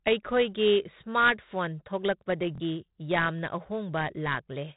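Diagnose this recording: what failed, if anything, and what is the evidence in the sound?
At the codec stage, 4-bit ADPCM compression damages the speech heavily throughout. Gritty hiss rides on every loud passage and sharp onsets crunch. On a spectrogram, energy stops dead at 3.9 kHz, with a noise floor that rises and falls with the speech. This points to a roughly 32 kbps stream.

At the driver or buffer stage, a repeated buffer causes a brief stutter from 2.55 to 2.60 s. A piece of about 23 ms plays two extra times, which fits a 1024-sample buffer, and about 50 ms of new audio is lost. The waveform shows identical back-to-back segments with hard joins.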